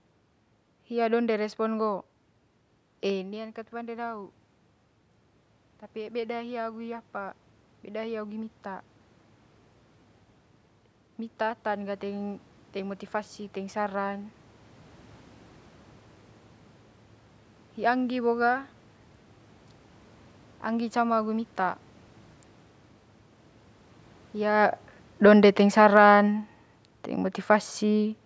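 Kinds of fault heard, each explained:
Automatic gain rising: the level control judged the input too quiet and raised its gain over about 3 seconds, so the voice and the room noise behind it swell together rather than the voice alone getting louder. From 5.92 to 8.94 s the input falls by about 13 dB and the gain climbs by about 5 dB to compensate. From 11.4 to 14.42 s it rises again, by about 4 dB.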